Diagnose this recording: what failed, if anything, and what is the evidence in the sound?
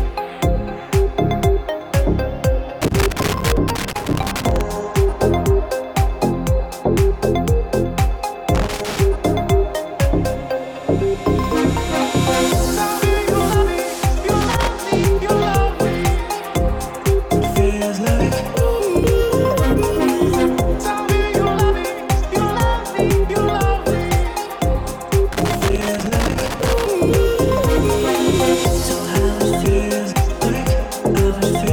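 Loose connector crackle points to the analogue wiring: a worn or dirty contact intermittently making and breaking as it shifts. Irregular bursts of crackle and scratching run from 2.82 to 4.61 s, 8.55 to 9.00 s, 14.41 to 14.68 s and 25.33 to 26.88 s. Each burst lasts from a fraction of a second to nearly two seconds, with uneven spacing and texture. That randomness separates it from a dropped buffer, which is a single momentary jump.

Dropped buffers are the likely cause of three isolated jumps, at 3.15, 19.04 and 25.62 s. Each is a tiny forward jump in the audio, a few milliseconds skipped with no gap of silence, as if the recording was spliced straight across. This points to the driver or buffer stage, where samples were overwritten before being collected. Unlike the crackle, each is one sharp, momentary event. Two of them fall inside crackle bursts.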